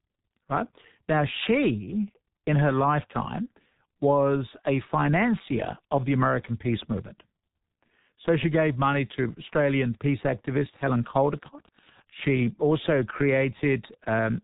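Speech, heavily damaged by the G.723.1 codec throughout. Nothing survives above 3.8 kHz, so the sound is muffled. At 6.3 kbit/s, with 30 ms frames and a slowly updated voice model, the voice turns hoarse and consonants smear together. From 8.83 s, just after "she gave", Wi-Fi interference starts and runs to the end. A faint tick repeats every 102.4 ms, about ten per second, well below the speech. This is a nearby Wi-Fi radio's beacon, rectified by the audio circuit.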